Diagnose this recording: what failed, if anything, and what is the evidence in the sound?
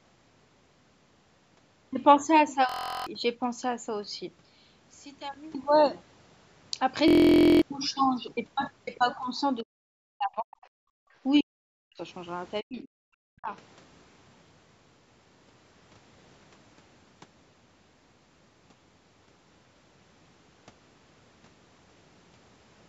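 System hang loop, 2.69 to 3.07 s and again 7.08 to 7.62 s, at the driver or buffer stage. Each time one 23.22 ms slice of audio repeats exactly, 16 times and then 23 times. The result is a steady 43.1 Hz buzz rather than a stutter, because the loop is so short. That loop length fits a 1024-sample buffer that the hardware kept replaying after the host stopped refilling it. Roughly 0.4 s and then 0.5 s of speech is lost.

One channel inverted, 4.41 to 5.54 s, most probably in wiring or the driver. For just over a second the centred speech collapses by about 19 dB and sounds faint. This is the sign of opposite-polarity channels cancelling when summed to mono. Only the small difference between left and right survives. The likely cause is one leg of the stereo pair flipped in polarity.

Speech suppressed in double talk, 9.62 to 10.58 s, 11.40 to 12.01 s and 12.63 to 13.49 s, in the call processing. 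In each stretch the talker's speech sinks by as much as roughly 40 dB, then recovers. That pattern is likely the echo canceller failing to separate the near talker from loudspeaker echo while both sides spoke. It then attenuated everything, within a band that already stops at 8 kHz from the call chain.

Other side's voice leaking through, 10.62 to 10.67 s, also in call processing. A brief 50 ms scrap of a second voice is audible, sitting around 35 dB below the main speech. Its timing, tucked between suppression episodes, points to the canceller likely leaving a residue of the far-end loudspeaker signal in the microphone path.

Background gated by the echo canceller, 10.86 to 11.12 s, in call processing. The room tone drops by about 34 dB for roughly a third of a second and then returns. The canceller clamped the microphone while the loudspeaker played and released it when it let go.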